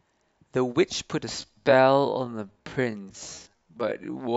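From 1.37 s onward, a time-stretched section, likely from software stretching, slows the speech to 0.55x at unchanged pitch. It drags, with harmonics drawn out sideways on a spectrogram.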